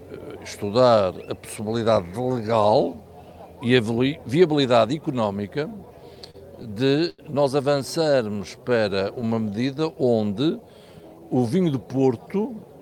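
From 5.85 to 7.21 s come repeated stalls (stutter): late packets drained the jitter buffer ten times, each gap, up to 89 ms, filled by prolonging the last sound and showing as short frozen, smeared spectrogram stretches. From 7.99 to 11.21 s, a jitter buffer slow-down repeats pitch periods, playing at 91% speed and adding 307 ms. The waveform shows duplicated cycles, with harmonics unshifted.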